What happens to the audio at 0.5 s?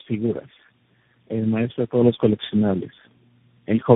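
Rough, muffled, warbly speech, nothing above 3.7 kHz, throughout the clip: tandem speech coding, four codecs in a row each re-coding the previous one's output.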